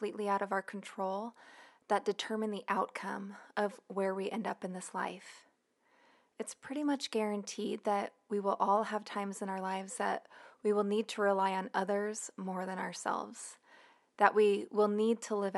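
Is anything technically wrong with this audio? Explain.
No, the speech signal shows no technical faults, with only the room's own background noise present at about 54 dB below the speech, which belongs to the recording environment rather than the system.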